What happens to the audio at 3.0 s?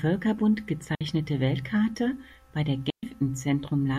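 A digital wireless dropout: the link lost too much data and the receiver muted from 2.9 to 3.03 s, just after "bei der", leaving a clean 130 ms hole of near silence with no noise burst.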